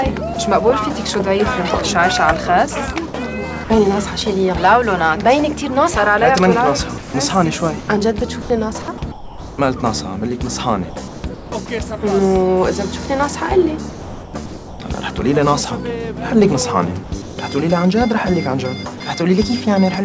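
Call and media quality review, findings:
Sound dropped by the voice detector at 0.34–0.36 s, 3.64–3.70 s and 18.98–19.00 s: single 20–60 ms holes filled with steady comfort noise, likely from the sender VAD. The fill is flat noise, not the repeated or smeared sound of packet-loss concealment.

Sound chopped by the voice detector at 6.98–9.58 s, 10.90–11.68 s, 13.90–14.80 s and 17.04–17.38 s: repeated cut-ins and cut-outs. The likely cause is the sender VAD toggling. Unlike the single dropouts, each stretch has several gaps. Through the G.722 path, nothing above 8 kHz.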